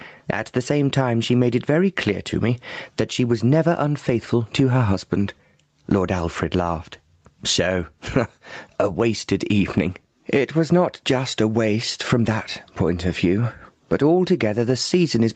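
From start to finish the level breathes with gain pumping. Loud and soft parts end up closer in level, with the gain swinging by around 20 dB. The likely cause is input gain set far too high, with a fast limiter clamping down on every peak. Unlike a noise gate, it does not cut the floor to silence. The call microphone processing's 8 kHz ceiling is present too.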